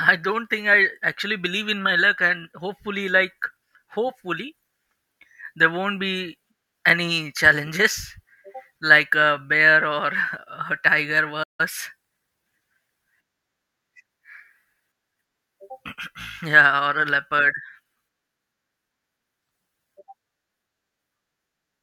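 It's a speech clip with one playback stall: at 11.43 s the audio just drops out and stays silent for about 160 ms, picking back up at 11.61 s. That pattern most likely comes from the player briefly running dry of data or getting its thread held up.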